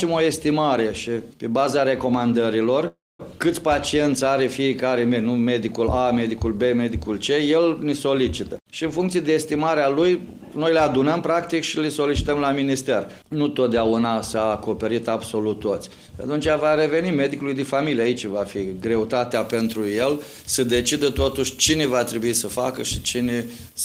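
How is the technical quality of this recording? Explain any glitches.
The recording has three distinct glitches: a brief dropout, a stretch that runs fast, and a harsh, over-bright ending.

From 2.87 to 3.21 s there is a call audio freeze. The likely cause is packets stalling in transit while the jitter buffer ran dry. The receiver stretched the last sound into a fading buzz, then about 220 ms of silence. The audio resumes where it stopped. Roughly 319 ms of gap is inserted, nothing is lost, and everything after arrives that much later.

From 8.50 to 11.30 s a jitter buffer speed-up occurs. Too much audio had piled up in the buffer. The receiver trimmed it by cutting out tiny pitch-period slices again and again. About a third of a second was removed in total. The sound plays at 110% speed while keeping its pitch, so this passage feels hurried and rushed.

From 19.34 s to the end, pre-emphasis is left on. 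A treble boost matching the FM 75 µs curve was applied, but the compensating de-emphasis never followed. At 10 kHz the level sits about 14 dB above 1 kHz. The result is thin, glassy and bright. Sibilant sounds hiss sharply, and the low end seems weak by comparison.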